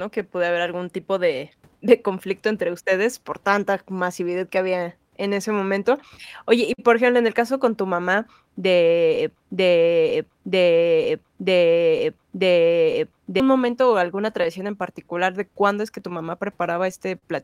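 From the start of the speech to the end, there is clock drift between sender and receiver: the sender's clock runs about 4% slow, so the receiver's jitter buffer keeps draining and has to stretch the audio by repeating short slices. It sounds like faint, irregular stumbles in the rhythm of the speech rather than one clear break. On a waveform the stumbles show as small duplicated patches at uneven spacing.

From 0.20 s to 17.24 s there are scattered short gaps, about thirty of them, spread singly across the span. Each comes from a packet that was lost or arrived late. The receiver fills each one by carrying the last sound forward. The longest fill is around 50 ms, and together they cover about 2% of the span. Each gap is heard as a brief tick, smear or hiccup. A spectrogram shows each one as a thin vertical band of frozen harmonics.

From 9.36 s to 13.40 s there is a broken-record loop. 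A 0.94 s fragment plays four times back to back, and whatever speech should have come in that stretch is lost. The likely cause is a player or stream that stalled and kept resending the last piece it held. On a waveform the four identical blocks sit side by side. A spectrogram shows the same pattern stamped out at regular 0.94 s intervals.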